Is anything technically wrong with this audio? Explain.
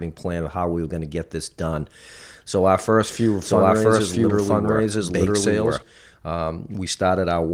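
Yes. From 3.04 s to 5.82 s the speech carries a doubled audio track. A second, full-band copy trails about a second behind, at roughly equal level. It likely comes from a slower capture path. The copy has no reverb, and it starts and stops abruptly. The light Opus voice compression is also present alongside it.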